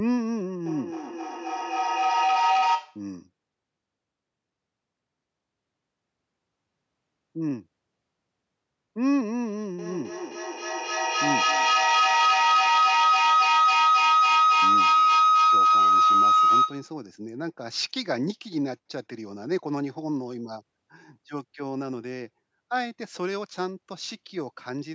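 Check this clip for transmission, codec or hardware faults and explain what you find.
The clip has a feedback howl in two places. The first runs from 0.66 to 3.13 s, a tone near 700 Hz swelling to about 6 dB above the speech. The second runs from 9.79 to 17.02 s, near 1.5 kHz and about 8 dB above. A microphone picks up a loudspeaker in the same room, and each trip around that loop adds gain until one favoured frequency rings. Both howls pulse roughly every 300 ms, the loop's delay. On a spectrogram each appears as a bright horizontal line thickening over time. The waveform envelope shows a matching rhythmic swell.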